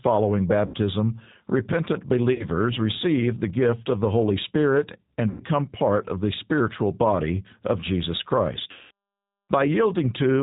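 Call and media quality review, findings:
G.729 codec throughout: rough, slightly synthetic speech with nothing above 4 kHz. This is an 8 kbit/s pulse-excited rebuild, not a plain low-pass, which would sound dull but smooth.

VoIP packet loss concealed by the speech codec at 0.66–0.76, 2.33–2.46 (before "receive the gift of"), 5.30–5.42 (before "part of the spiritual") and 8.71–8.91 s. About 80, 60, 100 and 200 ms were lost. Each sounds like a fading buzzy tone or coloured noise with a weak recovery afterward, not a silent dropout.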